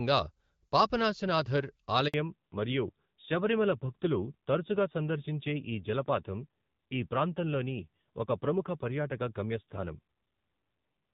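At about 2.08 s the speech drops out in a handover gap: the call is passed from one network to another, and for roughly 60 ms, until 2.14 s, no speech frames get through. The sound fades away within a few tens of milliseconds and goes silent until the new link picks up, so whatever was said in that slice is simply gone.

Right after, from 2.14 s to the end, you get a fallback to narrowband. Before the switch the speech has the wider, clearer HD Voice band of AMR wideband, which fits one of its middle-to-higher rates. After it, everything above 4 kHz is cut off. The speech sounds duller and rougher, which points to a lower-rate narrowband AMR mode rather than just a filter. That muffled, gritty character holds through the rest of the clip.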